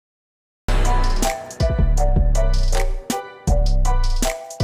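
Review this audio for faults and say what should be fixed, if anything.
Capture began late, so the first 0.69 s is digital silence and the sound then switches on at 0.69 s mid-event, with no natural attack or fade-in: a cut-off start that leaves the opening abrupt and clipped short. To prevent it, arm recording with a short pre-roll before the source begins.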